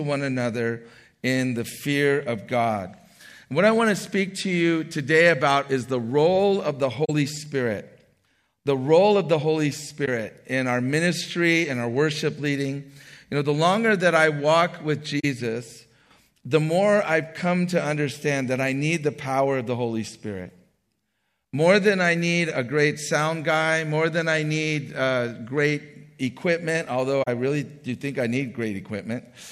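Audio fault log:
7.04 s, 10.05 s, 15.19 s, 27.23 s: corrupt frame concealed. The decoder masked damaged AAC frames, each lasting 28 to 54 ms, consistent with one to three frames.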